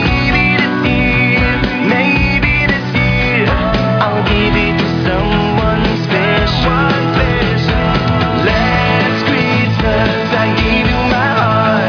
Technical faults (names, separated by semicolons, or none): none